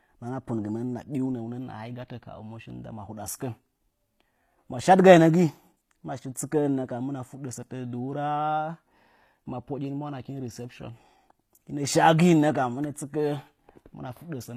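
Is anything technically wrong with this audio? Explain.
Yes. HE-AAC compression runs throughout the speech: the s sounds come out gritty and lispy, and the upper treble sounds metallic rather than natural. The likely cause is spectral band replication, in which the treble is rebuilt by copying lower bands upward, so its harmonics don't line up with those below. The damage is plainly audible, which fits a low bitrate around 24 kbps.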